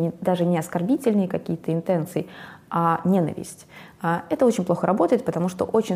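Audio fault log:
No faults detected anywhere in the audio.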